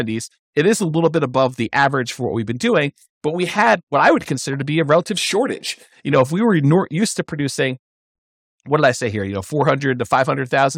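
No technical faults occur at any point in this speech recording.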